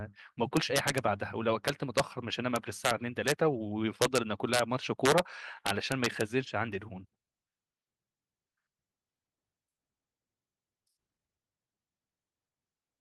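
Integer overflow breaks up the speech eight times: 0.57–0.98 s, 1.68–2.00 s, 2.56–2.91 s, 3.28–3.32 s, 4.02–4.18 s, 4.54–4.59 s, 5.05–5.19 s and 5.67–6.21 s. The level was pushed about 2 to 5 dB past full scale, and instead of being held at the limit, each peak wrapped around to the opposite extreme. The result is harsh, splintering cracks on the loudest syllables, far more violent than ordinary clipping.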